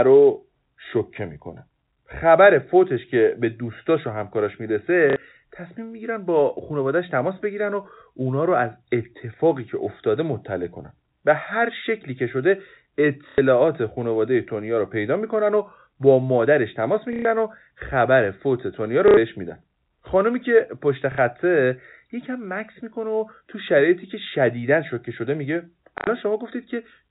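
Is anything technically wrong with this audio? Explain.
Yes, there's packet loss with the last packet repeated, at 5.1, 13.29, 17.13, 19.08, 21.12 and 25.98 s, with gaps of 60 to 120 ms. The receiver replays the previous packet, and the joins don't line up with the pitch, so you get a brief robotic stutter buzzing near 33 Hz, which fits 30 ms packets. This sits on top of the telephone-band G.711 sound, which stops at 4 kHz.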